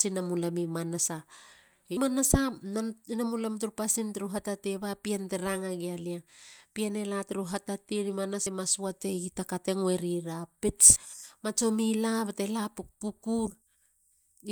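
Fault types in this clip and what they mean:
Compressed frames skipped: Whole blocks of the encoded speech never reach the output, so the audio jumps forward with no pause. This happens at 1.97 s, where roughly 150 ms goes missing, and at 8.46 s and 10.96 s, where about 70 ms drops out each time. Those gaps fit a 32 ms frame length, with about four frames lost in the first jump and two in each later one.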